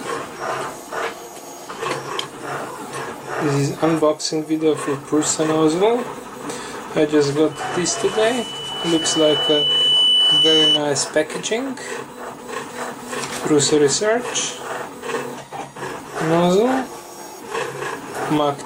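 From 7.51 s to 10.79 s the microphone picks up its own loudspeaker and the loop gain at 3 kHz exceeds one, causing loudspeaker feedback squeal. A single 3 kHz tone swells over roughly three seconds to sit a few decibels above the sound.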